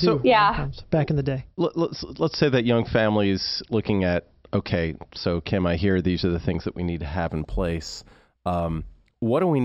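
From 7.28 s to the end at 9.65 s, the speech shows imaging from linear upsampling. The rate was raised by straight-line interpolation between samples, which fits a conversion from 12 kHz. That crude filter dulls the top of the band and leaves a mirrored copy of the spectrum from 6 kHz to 12 kHz, around 30 dB below the signal, heard as a light metallic shimmer on sibilants. On a spectrogram, a faint reflected band appears above 6 kHz.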